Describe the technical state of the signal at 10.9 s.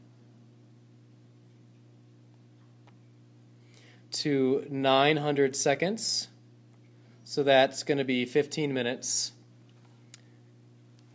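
At 10.9 s the resampler is restarted on every block, from 9.7 s to the end at 11.14 s. The sound points to a 48 kHz to 16 kHz conversion run on 10 ms blocks in isolation. Each edge errs, giving a 100 Hz buzz that, unlike mains hum, vanishes whenever the signal does.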